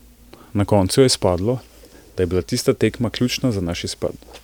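No technical faults can be heard anywhere in the speech; the signal holds steady throughout.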